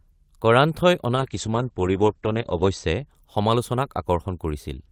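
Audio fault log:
1.16–3.10 s, call bitrate drop: The speech turns rough and watery, and the top end disappears, leaving it muffled until it clears near 3.10 s. The call's encoder was pushed to a far lower bitrate, which fits a fall from 32 to 12 kbps. It held that floor for about 1.5 s, coding each frame more coarsely. Audio bandwidth shrank from 20 kHz to 8 kHz, stripping the high frequencies.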